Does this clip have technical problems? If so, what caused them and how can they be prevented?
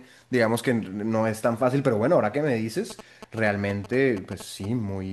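Yes. GSM signalling bursts, 2.90–4.66 s: a nearby 2G phone's radio pulses, rectified in the audio circuitry, produce galloping ticks and 217 Hz buzz roughly 15 dB below the speech. Keep mobile phones well away from the recording chain, or switch them off.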